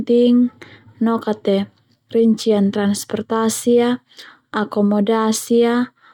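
No technical faults are audible anywhere in the speech recording.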